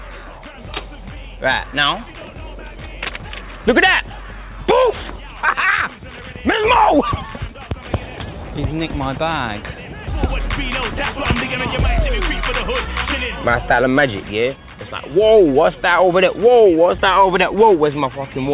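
No technical faults can be heard anywhere in this clip. It passed through a call path whose narrowband codec leaves nothing above 4 kHz, which fits G.711 mu-law at 64 kbps.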